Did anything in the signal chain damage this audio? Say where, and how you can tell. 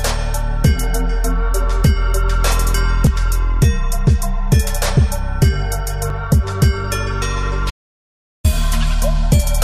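Yes. At 6.10 s there's an underrun with held sample, a driver or buffer-stage fault: the output ran dry for about 5 ms and the converter just held its last value, so the waveform sits flat. The 256-sample gap fits a 48 kHz buffer, and roughly 5 ms of audio is simply gone.

From 7.70 to 8.44 s there's an audio dropout to silence lasting about 740 ms. The sound cuts out mid-flow into silence with no room tone underneath, which points at the input or recording stage. A link loss or stray mute upstream is the likely cause.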